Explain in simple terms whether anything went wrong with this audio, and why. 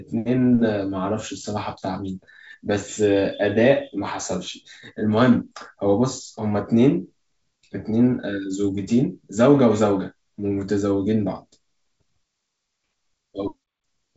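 Nothing went wrong here.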